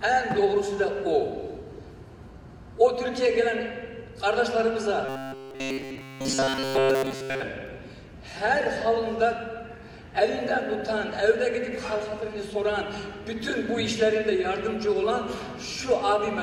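From 5.05 to 7.43 s the audio becomes a rigid, metallic 134 Hz buzz. This is robotic sound from repeated short buffers, likely from a segment of about 7.5 ms replayed throughout while new audio arrives too seldom. Unlike a stutter, the repeats fuse into one fixed pitch.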